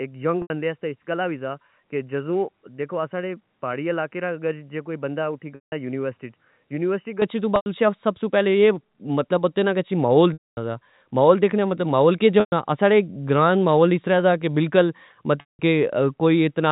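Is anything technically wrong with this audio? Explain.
Yes. The speech starts dull and boxy and stays that way until 7.22 s, where it suddenly opens up, and six short dropouts interrupt it with a buzzy hold and then a gap.

From 0 to 7.22 s, the sound is muffled, with nothing above 3 kHz. It is roughly 10 dB quieter than what follows and carries a different, faint background hiss, roughly 50 dB down. At 7.22 s it switches straight to a brighter tone with no silence in between. The likely cause is an input switched to a poorer device, such as a headset's call profile, whose narrower band, lower level and own noise floor shape the opening section. The G.711 telephone coding running throughout sets the 4 kHz ceiling after the switch.

The six dropouts are packet loss with pitch repetition, at these times:
0.42 s, 80 ms
5.55 s, 170 ms
7.56 s, 100 ms, just before "اسی سب سو"
10.33 s, 240 ms, between "اے کہ محول" and "سا محول دیکھنا مطلب"
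12.4 s, 120 ms, just before "ساڑے گراہ نا محول"
15.4 s, 190 ms

Each one starts as a held, buzzy tone because the receiver keeps repeating the last pitch cycle. That tone fades over about 50 ms, leaving silence for the rest of the gap, and the speech then cross-fades back in. The longest silences are at 10.33 and 15.4 s.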